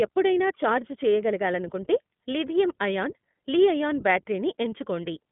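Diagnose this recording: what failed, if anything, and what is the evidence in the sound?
The iLBC codec failed this speech clip at the codec stage, throughout. Nothing passes above 3.8 kHz, and the band sits at 150 Hz to 3.5 kHz. Coding damage is plainly audible: a rough, synthetic texture. Each frame is coded independently, which fits 20 ms frames at 15.2 kbps.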